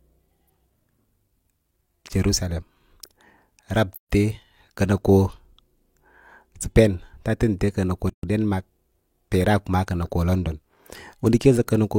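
The speech drops into short silences with smeared edges at 3.96 to 4.10 s and at 8.10 to 8.23 s, just before "den mark", then resumes where it stopped. These are gaps at joins of encoded pieces, recurring every 4 s, left because separately encoded segments were joined untrimmed.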